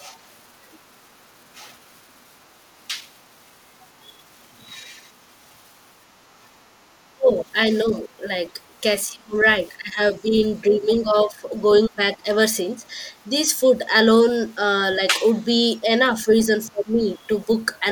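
At 6.7 s the room sound dips by about 8 dB for roughly a tenth of a second, coming back by 6.82 s. That's background gated by the echo canceller: it clamped the mic down while the loudspeaker was playing, then released it.

From 7.1 to 12.81 s the talker's voice keeps dropping out in pieces, adding up to around two seconds, with the worst dips roughly 25 dB deep. That's likely speech suppressed in double talk, with the canceller ducking everything because it couldn't tell the talker from the loudspeaker echo while both sides overlapped. The same thing happens again from 14.98 to 17.47 s, shallower at around 20 dB and under a second in total.

A faint second voice creeps in from 8.27 to 8.51 s and again from 16.64 to 17.65 s. It sits very low, around 35 dB and then 40 dB under the talker. That's likely the other side's voice leaking through, echo the canceller didn't fully remove from the mic.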